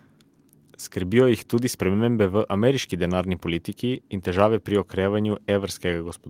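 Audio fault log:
No fault heard in this speech clip.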